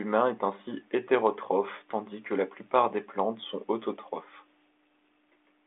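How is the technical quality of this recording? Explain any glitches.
The technical quality of this recording holds up, and there are no glitches to explain.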